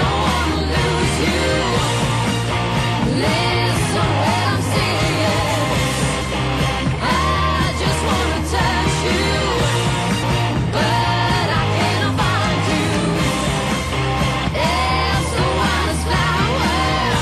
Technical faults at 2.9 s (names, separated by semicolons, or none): none